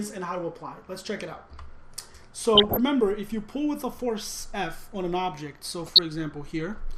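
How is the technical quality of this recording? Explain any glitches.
The technical quality is compromised: the whole clip carries audible codec damage, with two short bursts of reception errors on top.

MP2 compression is heard throughout: a dull top end and a gurgling, grainy texture. This is likely from MPEG Layer II coding starved of bits, which fits a low rate around 80 kbps, so upper sub-bands drop out and the remaining ones are coarsely quantised.

DAB burbling occurs from 2.55 to 2.77 s and again from 5.86 to 5.99 s, as short blips of noise and level jumps in single sub-bands. A bit error rate well under one percent is getting past error correction, corrupting samples into noise blips and scale factors so individual sub-bands jump in level for up to a frame.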